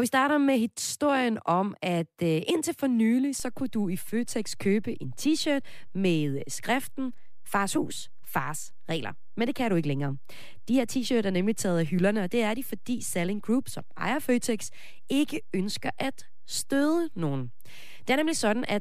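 A DC step occurs at 3.40 s, just after "øh indtil for nylig": the waveform's zero line suddenly shifts by about -34 dBFS and stays offset through to the end of the recording rather than returning or decaying. An abrupt change like this is what happens when a converter recalibrates or a source carrying an offset is switched in. It is heard as a single low thump at that moment, while the speech continues unchanged on top of the displaced baseline.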